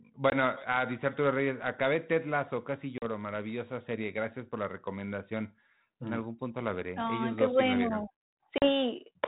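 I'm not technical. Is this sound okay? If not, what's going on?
No. Packet loss on an ADPCM call shows up three times: at 0.3 s just before "a dice" (about 20 ms missing), at 2.98 s just before "maravillosa serie gracias por", and at 8.58 s (about 40 ms each). Small chunks of the call never arrived and became sudden silence. The receiver predicts each moment of sound from the previous ones, so after each gap it starts from a wrong guess: speech returns with slight roughness, then settles.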